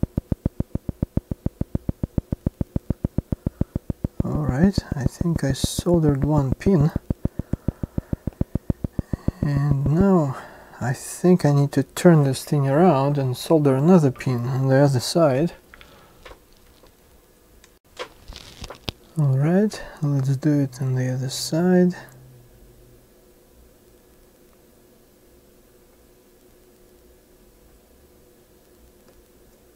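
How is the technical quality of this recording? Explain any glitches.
There's one clear problem: a train of clicks from 0.03 to 10.02 s, around seventy regular pops at 6.9 per second, standing well above the signal, likely interference or a faulty connection.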